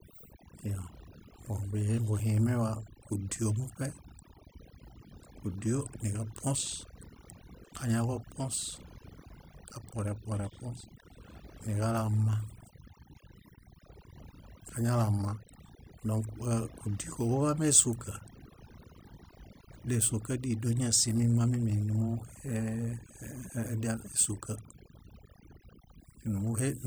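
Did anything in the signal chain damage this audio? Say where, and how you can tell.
Yes. Overdone noise removal has damaged this speech from start to finish, at the call-processing stage. The suppressor was pushed so hard that any frequency band near its noise estimate gets gated down or off, taking the quieter parts of the voice with it. Between phrases the background drops to near silence with twinkling specks. On a spectrogram the background shows as scattered isolated dots, and the voice's harmonics are broken up with gaps.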